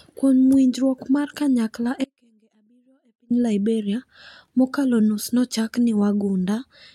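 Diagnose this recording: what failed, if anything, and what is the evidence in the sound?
An audio dropout to a faint residue follows "winjruok mar kanyakla": from 2.04 to 3.30 s the speech cuts abruptly to faint sound, about 40 dB down. The cause is likely an intermittent analogue connection with the downstream path still live.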